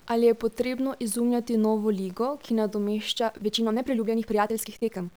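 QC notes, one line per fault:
Throughout: low bit depth without dither. The audio was most likely reduced to about 8 bits by plain truncation with no dither added, so the rounding error follows the speech. The result is a grainy, gritty distortion around 35 dB below the speech that changes with each syllable. It is most obvious on quiet tails and soft consonants, where the signal flips between the few remaining levels and sputters or falls to silence.
3.13–5.17 s: time-stretched section. Just after "izumljati novo ligo ki", the audio was likely squeezed by software to fit a shorter length, playing about 1.57 times faster. To keep the pitch unchanged, the process dropped short pieces of the waveform, so the pace jumps abruptly while the pitch stays the same. The speech sounds rushed through to the end of the clip.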